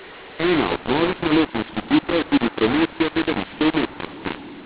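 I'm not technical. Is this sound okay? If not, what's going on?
No. Throughout the speech there's a fault called mu-law and A-law mixed up. The telephone audio was packed using one volume scale (mu-law) but unpacked with a different one (A-law), so loudness levels get scrambled. That makes the speech sound harsh and distorted and fills pauses with hiss.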